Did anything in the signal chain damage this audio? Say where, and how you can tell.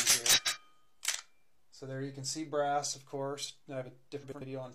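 Yes. Frames out of order at 0.33–0.58 s and 4.21–4.42 s: a network or packet stage swapped neighbouring two-frame runs of about 93 ms, giving garbled flutter.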